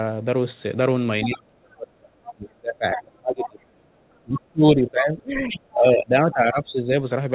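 From 1.25 to 3.88 s the speech is held down, by as much as about 35 dB. This is speech suppressed in double talk, likely from the echo canceller ducking everything while both sides spoke. Inside that stretch, at 2.26 to 2.32 s and 2.96 to 3.02 s, short scraps of the other side's voice leak through, about 20 and about 15 dB below the speech. From 4.23 to 6.95 s the speech is suppressed again, dipping by up to about 25 dB. Another faint scrap of the far voice comes through at 5.5 to 5.57 s, about 15 dB down. Throughout, nothing is heard above 4 kHz, which fits a narrowband telephone codec such as G.711.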